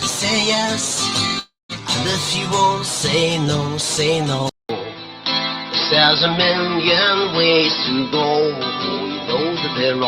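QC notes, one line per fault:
1.39 to 1.72 s, long network dropout: the audio stops for roughly 0.3 s; the last sound is carried on as a fading buzz or hiss, then about 160 ms of silence before the audio resumes, with the lost portion gone. This points to a likely stall in packet delivery.
4.49 to 10.08 s, input switched to a poorer device: after a 200 ms silence the sound turns dull or boxy, with nothing above 5.6 kHz and a new noise floor about 30 dB below the signal, level unchanged. The likely cause is a change to a narrower-band microphone or headset profile.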